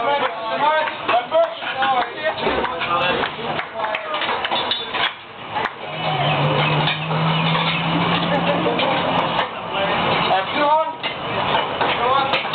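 The input gain was likely set far too high for the microphone, leaving a fast limiter or compressor to drag the level down on every loud sound throughout the clip. The result is gain pumping, with the level swinging by something like 20 dB. Loud and soft passages sit unnaturally close together, giving a squashed, breathing quality, heard within a call-style band that stops around 8 kHz.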